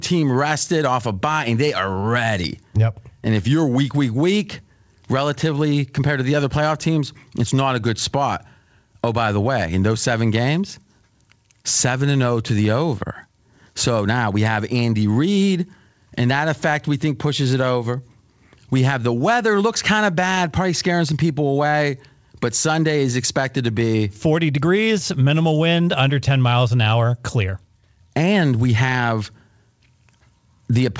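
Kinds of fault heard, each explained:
No faults detected; the speech carries the normal coding of a wideband call path, with nothing above 8 kHz, consistent with G.722.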